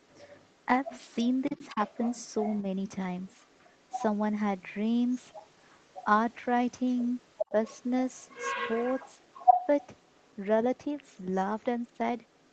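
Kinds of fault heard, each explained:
Other side's voice leaking through: a second voice, likely uncancelled loudspeaker echo, sits under the speech at 1.45–2.62 s, loudly at 6.9–10.36 s, and faintly from 10.77 s.
Speech suppressed in double talk: during that first overlap, around 1.49–1.79 s, the speech dips briefly by roughly 10 dB, likely the echo canceller turning down both voices at once.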